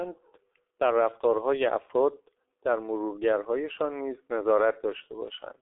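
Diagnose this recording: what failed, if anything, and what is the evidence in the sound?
The failure is at the codec stage: G.723.1 coding runs through the whole speech clip. Nothing survives above 3.8 kHz, and the band sits roughly between 300 Hz and 3.6 kHz. The speech sounds muffled and hoarse, and consonants smear together. The damage is heavy and constant, which fits a bitrate near 6.3 kbit/s. The coder models the voice in 30 ms blocks. It tracks fast changes poorly, so crisp detail is lost.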